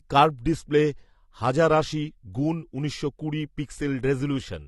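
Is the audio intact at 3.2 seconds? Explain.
No. At 3.2 seconds, as throughout the clip, the speech sounds dull and smeared, with a warbling, fizzy edge on sibilants and nothing above about 11.5 kHz. This is likely AAC compression, consistent with AAC-LC at around 32 kbps, starving bands, leaving spectral holes and lowering the cut-off.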